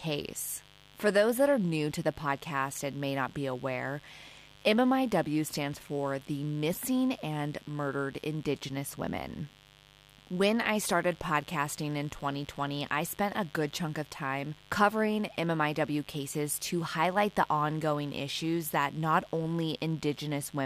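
Mains buzz runs through the whole clip, from start to finish. Some switching device on the power side, such as a dimmer or rectifier, or a break in cable shielding, is coupling sharp spikes into the signal path twice per 50 Hz cycle. Those spikes carry harmonics of 50 Hz stretching well into the kilohertz range, so the result is a constant, gritty, raspy buzz rather than a smooth hum, sitting roughly 25 dB below the wanted sound.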